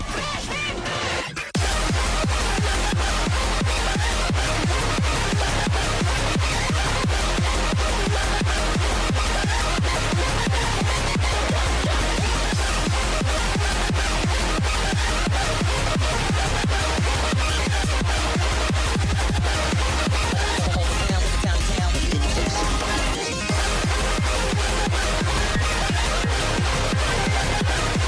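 No technical faults can be heard anywhere in this audio. There is nothing to place on a timeline.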